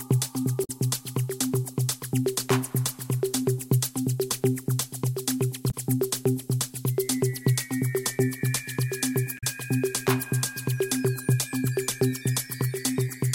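Three short bursts of damaged data in a compressed stream break up the audio. They fall at 0.64 to 0.70 s, 5.68 to 5.74 s and 9.37 to 9.44 s. Each lasts about 60 ms and is heard as a brief chirp, squawk, click or short hole. At those points the coded frames are corrupt. The decoder misreads them, loses its place, and produces garbled output until it locks onto the next valid frame header.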